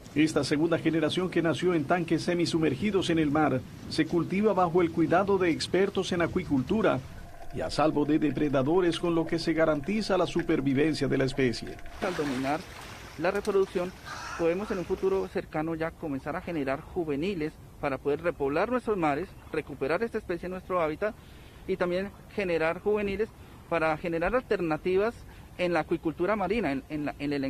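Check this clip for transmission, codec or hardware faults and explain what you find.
Nothing turns up here worth flagging, so there's no problem to report.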